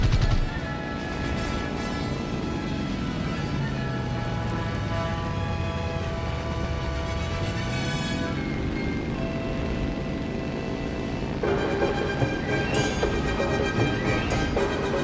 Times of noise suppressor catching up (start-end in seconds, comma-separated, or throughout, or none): none